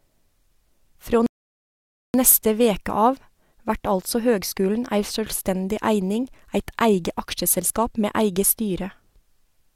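At 1.26 s the speech stops dead for about 0.88 s, a rebuffering stall. The player ran dry and waited for more data. It resumes exactly where it broke off.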